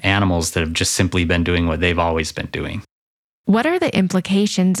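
Nothing in this bit of speech calls for comment, since no technical faults turn up anywhere in it.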